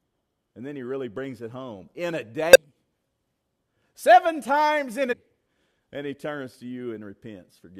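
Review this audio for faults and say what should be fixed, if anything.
There are two short bursts of damaged data in a compressed stream: one from 2.53 to 2.56 s, right after "it home in a", and another from 5.11 to 5.13 s, just after "seven times in". Each is a quick disruption lasting around 24 ms. Some bytes in the encoded stream got corrupted, so the decoder couldn't read those frames properly, lost its place, and had to hunt for the next valid frame header. To prevent it, carry the stream over a path with checksums or error correction and re-fetch any frames that fail verification.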